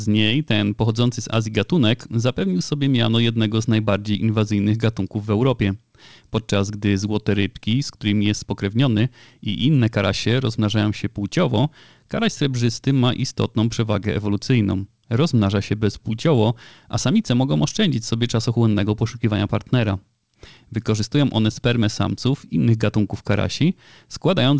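Clock drift between sender and receiver runs through the whole clip: the sending side's clock appears to run fast, by roughly 4 percent. Audio therefore arrives faster than the receiving side plays it out, and the jitter buffer keeps filling. Over the full length of the speech the surplus accumulates steadily, so the receiver has to keep discarding material to stop the backlog growing. The result is a persistent, slightly hurried character to the timing.

Those discards appear as repeated timing corrections from 0.07 s to 24.52 s, the receiver trimming short pieces of speech so that playback effectively runs at about 104 percent speed. All the cuts go in the same direction, but they come at uneven intervals. Each one is small and is heard, if at all, as a faint hiccup or a momentary skip rather than a gap. Together they give the delivery a slightly unsteady, rushed pace. Underneath this, the band-limited G.722 call path leaves nothing above 8 kHz, which fits a 64 kbps wideband link.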